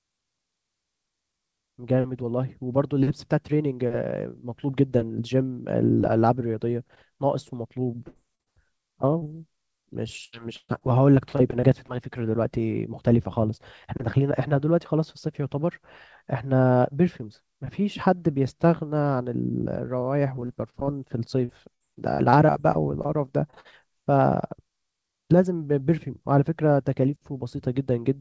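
Speech carried over a call link whose band stops at 8 kHz, which points to a G.722 codec at around 64 kbps, and it is broken up by packet loss in several places. A burst of packet loss at 8.08 to 8.17 s, and another at 8.41 to 8.48 s, loses about 80 ms and 60 ms of audio. The receiver stretches the last sound across each hole (73 ms and 50 ms of filler) and fades it, so it comes out as a held buzz or fading hiss before the speech jumps ahead. On a spectrogram this looks like frozen, blurred harmonics sinking in level and then cutting off abruptly. Short concealed packet loss sits right before the second burst at 8.35 to 8.41 s, then again at 9.18 to 9.29 s with a nested 20 ms hole at 9.23 to 9.27 s. These gaps are 20 to 40 ms long and each is patched with continued pitch or shaped noise, heard as a brief smear or wobble where a consonant can disappear. In the waveform they appear as small smooth patches. 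The 9.18 s patch also adds a little extra time, roughly 15 ms. Repeated packet loss (robotic sound) runs from 10.25 to 11.90 s, with eight gaps totalling 320 ms and the longest at 121 ms, and again from 20.36 to 23.74 s, with eighteen gaps totalling 500 ms and none longer than 56 ms. Concealment fills about a fifth and about a seventh of those spans, so the speech turns choppy with pieces missing. On a spectrogram these spans show a comb of vertical seams between smeared, stretched segments.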